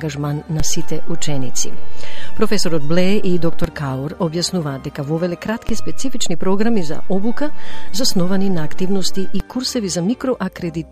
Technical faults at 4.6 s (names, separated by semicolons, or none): none